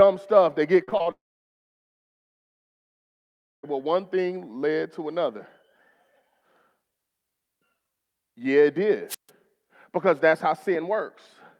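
Speech clip with three transmission faults. From 0.83 to 1.07 s, repeated packet loss (robotic sound) occurs: four packets in quick succession fail to arrive in time, and the receiver patches each hole by extending the last sound. About 100 ms is lost and concealed this way, roughly 41% of that stretch, with the longest gap at 39 ms, so the sound turns choppy with pieces missing. Straight after, from 1.11 to 3.65 s, comes what is likely a long network dropout, where the stream stops arriving altogether. After a brief continuation of the last sound, about 2.45 s of the roughly 2.5 s gap is silence, and the speech then resumes further on, with the lost part simply gone. From 9.08 to 9.30 s there is a wireless microphone squelch dropout. The analogue FM radio signal fades until the receiver's squelch mutes the output. It is heard as a rise of hiss or static, then a hole of near silence lasting about 143 ms, before the speech comes back.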